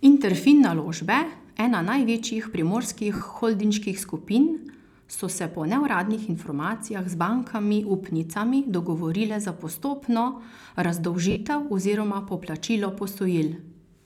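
At 3.15 to 3.21 s, just before "holdinških skupin", and 11.31 to 11.36 s, before "oziroma poplačilo", lost LE Audio frames leave gaps the decoder fills with reused spectra with random signs, heard as a brief noisy smear. A spectrogram shows blurred, structureless energy bands.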